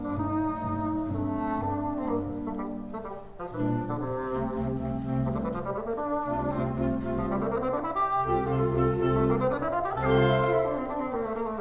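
Nothing is technically wrong with this audio.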